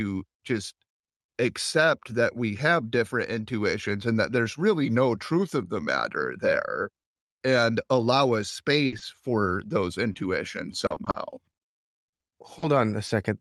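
From 8.42 to 13.10 s, just after "there and allow a", the speech has scattered short gaps. Packets went missing or arrived late in around ten places. The receiver patched each hole by extending the previous sound. Brief ticks and smears result, the longest around 70 ms.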